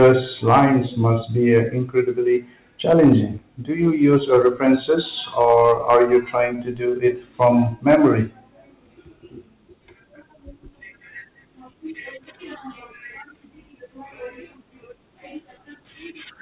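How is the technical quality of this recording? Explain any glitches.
The recording has two kinds of fault, on a narrowband call path whose band stops at 4 kHz, which fits a telephone codec such as G.711 mu-law.

Hard clipping appears at 0.01–0.65 s (ending just before "must be"), 2.89–3.13 s, 4.05–4.78 s, 5.41–6.16 s, 7.41–7.48 s and 7.90–8.08 s. Loud stretches turn rough and fuzzy. The level was overdriven by about 3 to 7 dB past what a stage could pass, so the peaks were sliced flat, adding harsh upper harmonics.

A short stall from a late packet occurs at 6.56–6.61 s. The sound is briefly held, with a slight buzz or dip. A packet arrived late, the jitter buffer ran dry, and the receiver stretched the previous audio by 16 ms before resuming. Nothing was lost, but timing shifted by 16 ms.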